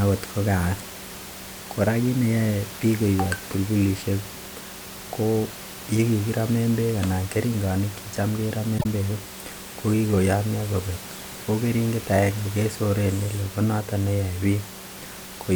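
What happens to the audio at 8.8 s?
A corrupt frame was decoded from 8.78 to 8.86 s, right after "beek anan keringonik chetam": about two damaged frames played anyway, misplacing energy in frequency as a brief chirp, squeak, blip or burst of noise peaking near about -10 dBFS.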